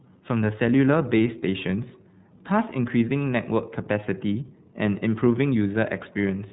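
From start to finish the speech sounds muffled and boxy, with nothing above about 3.9 kHz, and carries a plainly audible rough, slightly synthetic texture. That is the iLBC codec: a narrowband VoIP coder working on 30 ms frames, here at 13.33 kbps.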